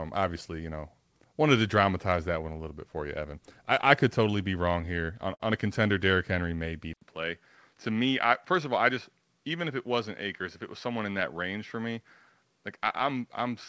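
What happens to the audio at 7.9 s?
At 7.9 s the speech sits inside a stretch, from 6.93 s to the end, where the input likely switched to a poorer device. After an 80 ms silence, it turns duller and about 5 dB quieter, with a narrower band and a faint new noise floor. The spectrogram's top edge drops from 8 kHz, and the waveform shrinks.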